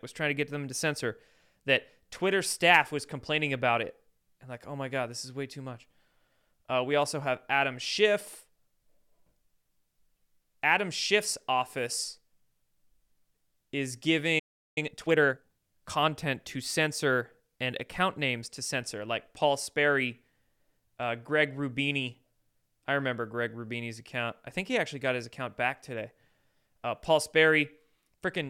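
A playback stall at 14.39 s silences the speech for about 370 ms until 14.78 s, likely because the player ran short of data or its thread was blocked. Time-compressed catch-up follows from 14.78 to 15.52 s, as small pieces are cut out and cross-faded to run at 1.5 times speed, hurried but at normal pitch.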